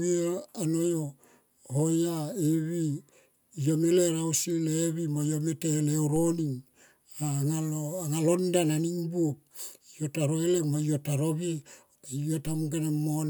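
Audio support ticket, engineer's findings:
DC step at 6.16 s: low thump as the waveform's zero line jumps by about -32 dBFS, then drifts back as a roughly 2 Hz high-pass bleeds it off. Probable component: ADC recalibrating or an offset input switched into the chain.

DC step at 12.47 s: identical thump, same step size and same slow decay. Speech continues unchanged across both events. Same converter or offset-switching source suspected.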